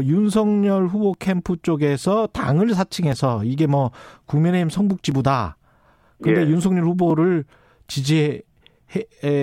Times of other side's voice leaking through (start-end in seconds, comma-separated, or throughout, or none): none